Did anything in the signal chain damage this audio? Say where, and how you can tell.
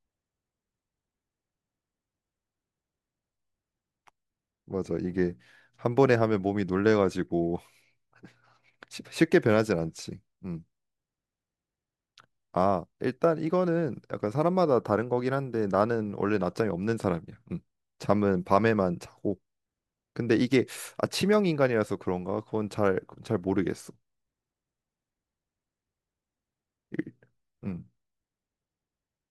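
No, nothing damaged this audio.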